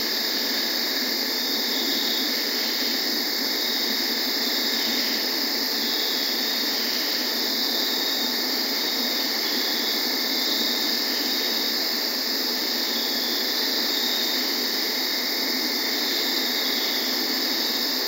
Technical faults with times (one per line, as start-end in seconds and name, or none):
none